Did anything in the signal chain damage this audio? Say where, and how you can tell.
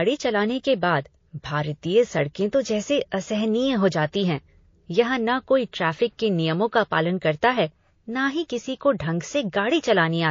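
Yes. The codec stage is the likely culprit: MP3 compression at a starved bitrate, which fits something around 32 kbps. Throughout the speech, weak spectral lines flicker between frames, giving a watery, swirly texture, metallic chirps on s sounds, and smeared attacks.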